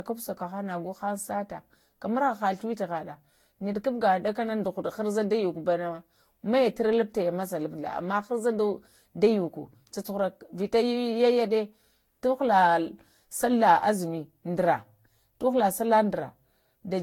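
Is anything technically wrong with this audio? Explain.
Yes. Throughout the speech, there is generation loss. It likely comes from around seven repeated lossy encodes, which fits Vorbis near 70 kbit/s. Each pass requantises on a shifted frame grid, so the noise and spectral holes pile up. The result sounds swirly, smeared and hollow, with blurred attacks and nothing above 19.2 kHz.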